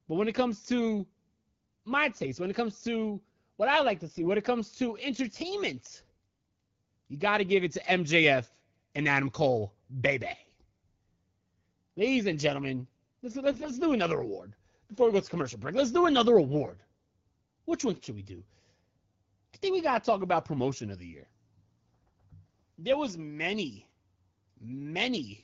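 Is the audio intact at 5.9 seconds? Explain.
Yes, the audio is intact at 5.9 seconds, with no fault at that moment.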